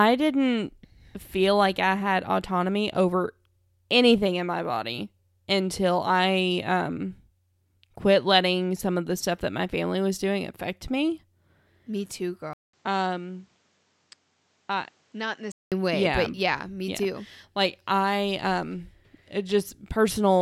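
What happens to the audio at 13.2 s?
At 13.2 s the speech sits inside a stretch from 12.53 to 15.72 s where it turns dull and boxy, with nothing above 8.7 kHz. It drops about 10 dB and gains faint new background noise. A 0.2 s silence marks the switch. This is likely an input switched to a poorer device. Just after the switch come the words "way yeah but yeah".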